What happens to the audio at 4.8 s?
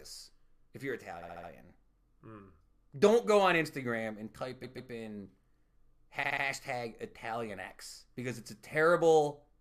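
At 4.8 s the speech stutters from repeated frames, spanning 4.62 to 4.90 s just after "and type". A block of about 139 ms of compressed audio was decoded twice more than it should have been, so the same fragment plays three times in a row and adds about 279 ms to the clip.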